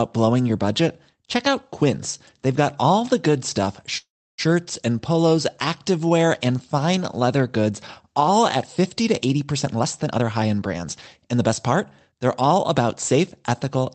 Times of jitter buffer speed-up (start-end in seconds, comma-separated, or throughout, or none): 9.63-10.86, 11.28-12.13